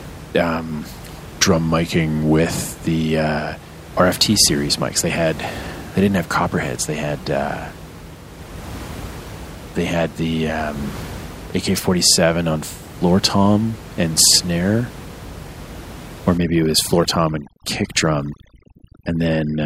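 From 1.12 to 2.40 s, just before "the uh", the speech slows by about 5.6% and drops nearly a full semitone (about -100 cents), then snaps back. That's a drift correction step, likely clock-matching software nudging its playback rate to rebalance a buffer.

From 16.38 s to the end of the clip, there's overdone noise removal. The room noise, about 16 dB under the speech, gets clamped into near-silence with twinkly specks, and quieter parts of the voice get pulled down along with it.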